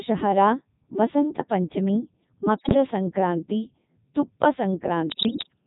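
From start to finish the speech passes through a Codec 2 vocoder. Its heavy buzz fits the codec's 3.2 kbit/s mode. The decoder keeps no waveform. It rebuilds the voice from sine waves, guided only by pitch, voicing, energy and a coarse spectral envelope. So every syllable sounds robotic and buzzy. The damage is heavy and runs through the whole clip.

From 2.58 to 2.74 s, bit errors on digital voice radio break in. Around one bit in ten arrives flipped. Each bit steers pitch, level, voicing or spectrum for a whole frame, so the synthetic voice lurches in pitch and loudness. Its tone colour shifts too. It breaks into warbling bleeps. A longer burst follows from 5.10 to 5.48 s. It is the same kind of corruption, and it turns the audio into robotic gibberish for that stretch.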